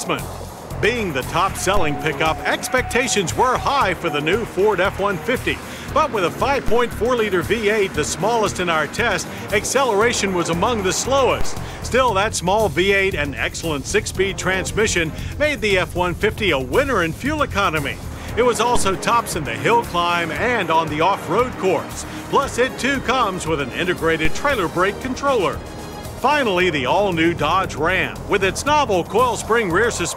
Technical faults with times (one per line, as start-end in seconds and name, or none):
1.77 DC step
6.68 DC step
11.41 DC step
18.76 DC step
24.25 DC step